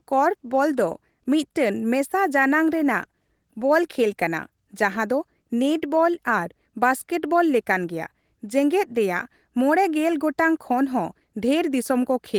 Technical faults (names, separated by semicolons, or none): none